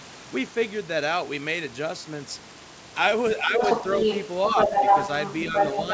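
From 3.42 to 3.61 s, the echo canceller likely hit double talk and could not tell the talker from the loudspeaker echo, so it turned the microphone signal down. This is speech suppressed in double talk. The voice dips by about 5 dB for about 150 ms in total, sounding briefly pulled back.

Right after the dip, the canceller likely failed to clear the far end's loudspeaker sound from the microphone, and the other side's voice leaks through. From 3.6 to 4.25 s a second voice runs alongside the talker at roughly the same loudness, so the two compete. After a short gap it returns from 4.46 s to the end of the clip, now noticeably louder than the talker, by about 5 dB, so the leaked voice dominates the close of the recording.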